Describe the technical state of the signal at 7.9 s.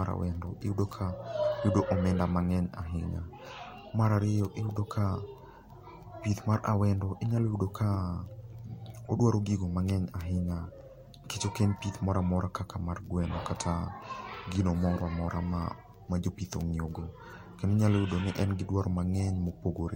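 The speech signal at 7.9 s is intact, with no dropout, distortion or other fault at that point.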